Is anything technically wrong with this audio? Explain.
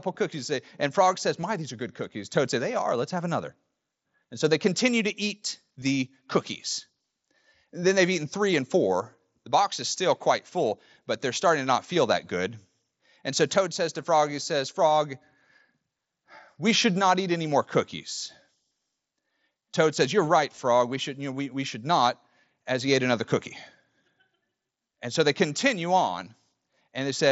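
Yes, there is concealed Bluetooth headset packet loss at 1.41 to 1.43 s, 5.81 s, 20.56 s and 26.76 s. Dropped links were filled by repeating a closely matching stretch of recent waveform. The gaps last about 7.5 to 22.5 ms, which fits 7.5 ms mSBC frames. The single-frame losses at 5.81 s and 26.76 s are nearly hidden, while the multi-frame runs at 1.41 s and 20.56 s are brief buzzy holds with a slight warble as real sound resumes.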